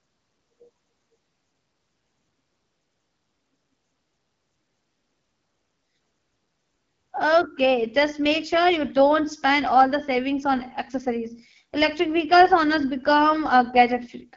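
AMR wideband (HD Voice) codec damage runs through this whole speech clip, giving a rough, raspy edge that fits a low 8.85 kbit/s rate, with nothing above 7.3 kHz.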